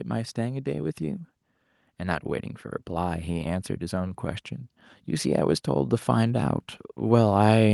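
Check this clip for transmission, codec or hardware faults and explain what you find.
Automatic gain rising shows up twice, from 1.98 to 4.51 s (about 4 dB) and from 5.35 s to the end. Each time the AGC judged the input too quiet and slowly raised gain, so speech and background swell together.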